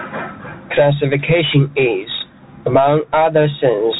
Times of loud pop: none

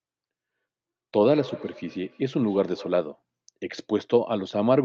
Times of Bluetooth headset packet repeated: none

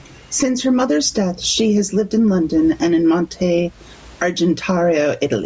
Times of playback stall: none

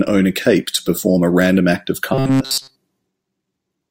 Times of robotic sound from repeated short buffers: 2.14-2.76

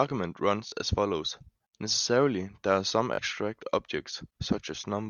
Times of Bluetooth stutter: 0.68-0.72, 3.14-3.18

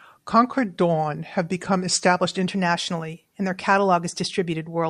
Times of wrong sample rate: 0.00-2.47

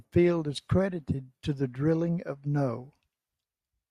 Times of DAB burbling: 1.13-1.27, 2.81-2.86

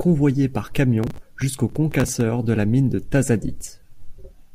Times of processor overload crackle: 1.04-2.21

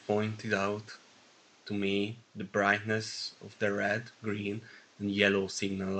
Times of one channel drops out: none

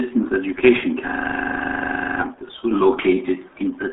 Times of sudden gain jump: none

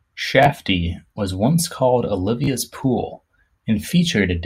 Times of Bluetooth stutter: 0.43-0.48, 2.44-2.48

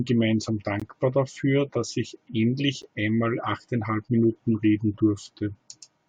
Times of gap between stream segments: 0.80-0.82, 2.82

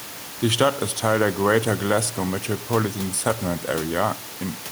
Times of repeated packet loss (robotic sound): none

